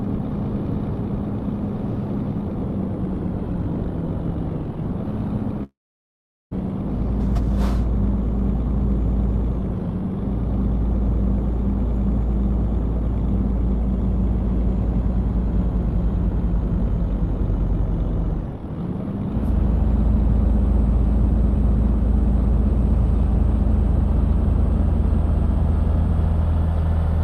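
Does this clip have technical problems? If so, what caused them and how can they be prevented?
Yes. From 5.63 to 6.53 s the sound gives way to a brief buzz that fades, then about 0.77 s of silence, before resuming further on with roughly 0.88 s never heard. This is likely a long network dropout. It differs from a short packet loss because concealment runs out and leaves silence instead of a barely noticeable smear. A more stable connection, a deeper jitter buffer, or redundant packet transmission would help prevent it.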